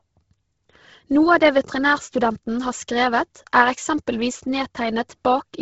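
Throughout the speech, the band stops at 7.7 kHz and the upper range sounds breathy and grainy, with heavy codec damage. This is likely Bluetooth LC3 compression, whose 10 ms transform frames at a rate near 16 kbps discard upper spectrum and refill it with noise.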